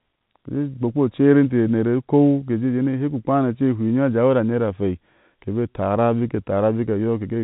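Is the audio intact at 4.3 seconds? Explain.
Yes, at 4.3 s the audio is intact, with only the expected G.711 telephone coding band limit, which leaves nothing above about 3.8 kHz.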